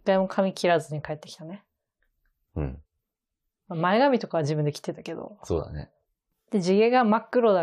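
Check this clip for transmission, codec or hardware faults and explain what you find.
No transmission, codec or hardware fault can be heard anywhere in this speech recording.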